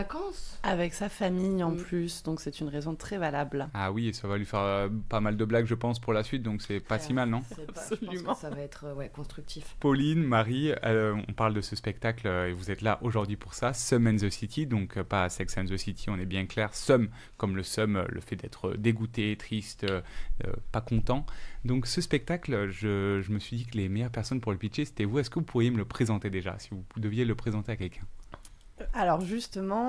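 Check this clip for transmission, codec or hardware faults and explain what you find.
Nothing in the transmission path or the hardware shows up as a fault on listening, and the signal holds steady and intact throughout.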